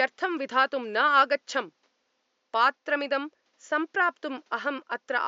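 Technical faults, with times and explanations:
No technical faults are present in this speech recording, and the only background sound is the room's own ambient noise, sitting about 47 dB below the speech.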